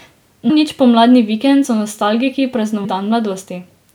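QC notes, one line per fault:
0.49 s, compressed frames skipped. Roughly 300 ms of speech is missing before "nič pomladni vikend so". The audio jumps ahead by the length of the missing frames.
1.64 s, compressed frames skipped. About two 26.1 ms frames drop out between "nič pomladni vikend" and "so nostalgiki". The jump is brief.
2.84 s, compressed frames skipped. Roughly 200 ms vanishes after "pomladni vikend so nostalgiki". Whole frames were not decoded, so the speech leaps ahead.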